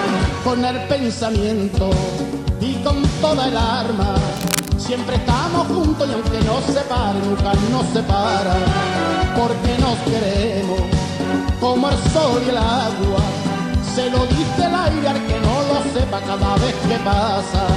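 From 4.37 to 4.69 s a burst of cable scratch noise sits only slightly below the sound, a dense, irregular rustling, likely from a worn connector or cable shifting. Unlike isolated digital clicks, it is a dense, grainy scrape lasting about a third of a second.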